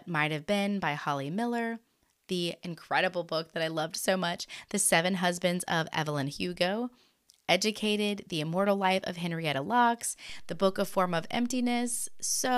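At 10.30 s there is a DC step in this speech recording. The zero line of the waveform jumps suddenly to a new level, about -41 dBFS away from centre. It stays shifted until the clip ends, about 2.3 s later. A jump like this happens when a converter recalibrates or an input carrying an offset is switched in. It is heard as a single low thump or click at the moment of the jump. The speech carries on unchanged over the shifted baseline.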